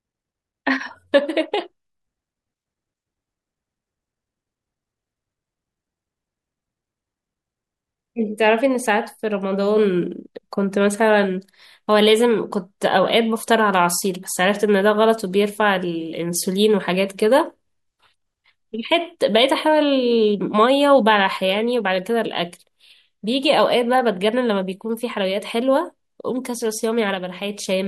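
Speech recording with no audible technical faults anywhere in the signal.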